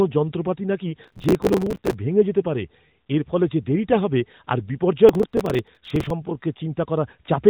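The processor fell behind and missed a long run of audio deadlines, each small buffer, around 5 ms, replaced by old audio. That processor overload crackle tears gritty at 1.04–1.94 s, after "যন্ত্রপাতি নাকি", and again at 5.09–6.11 s, after "যে দেরিটা হবে আর", over narrowband speech capped near 3.8 kHz.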